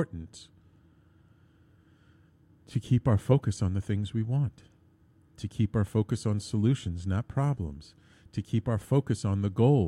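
No technical faults are audible anywhere in the recording.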